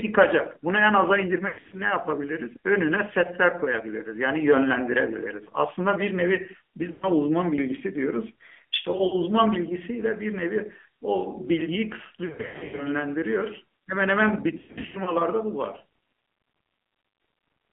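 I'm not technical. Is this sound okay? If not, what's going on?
No. The whole recording has gone through the AMR narrowband mobile codec, the old phone-call format. It keeps only a thin middle slice of the sound, roughly 250 Hz to 3.5 kHz. So the speech sounds muffled, buzzy and somewhat synthetic throughout.

There are also lost AMR speech frames. Small chunks of the signal were garbled by radio errors and thrown out, and the phone guessed at them by repeating the last sound while fading it. You hear brief warbles, smears and dropouts at 1.48 to 1.78 s, 6.92 to 7.10 s, 8.92 to 9.15 s, 12.26 to 12.88 s and 14.58 to 15.15 s.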